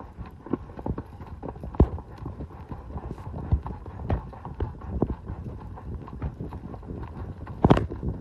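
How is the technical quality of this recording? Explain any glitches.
No glitches or faults heard.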